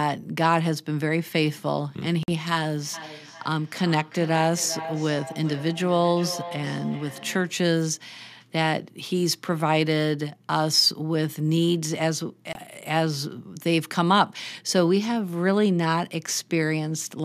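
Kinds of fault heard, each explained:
Bluetooth stall: Brief gaps of silence, about 49 ms at 2.23 s and 22 ms at 12.53 s, after which the speech resumes. Likely, interference delayed the wireless packets, so the headphones' buffer ran empty and playback halted until the resent data arrived.
Feedback echo between two devices: From 2.94 to 7.69 s, the speech comes back at a steady interval of roughly 0.4 s, thin and ringing, its loudest repeat about 13 dB below the direct sound. A second device in the room replays the audio, which a microphone picks up again, and no echo canceller removes it.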